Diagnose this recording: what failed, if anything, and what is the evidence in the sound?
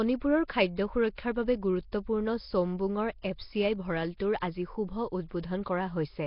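Codec stage: rough, hissy, underwater speech throughout, likely from heavy Nellymoser compression near 22 kbps; the spectrogram shows noise-filled bands and nothing above 5.3 kHz.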